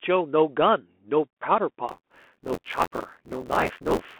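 Throughout, the Bluetooth CVSD headset codec squeezes the speech into a telephone band of 250 Hz to 3.4 kHz, with a hard spectrogram ceiling near 3.4 kHz and a grainy noise floor beneath.

From 1.88 s to the end, buffer tearing adds a robotic 86.1 Hz buzz. That rate fits a 512-sample buffer, where roughly a third of each period replays audio from about 20 ms earlier. The waveform shows hard jumps every 11.6 ms, and the spectrogram shows regular vertical striping.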